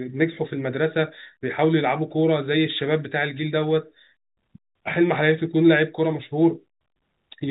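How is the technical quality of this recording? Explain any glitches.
The technical quality of this speech recording is sound, with no glitches to explain, and it carries the narrow band of G.711 telephone coding.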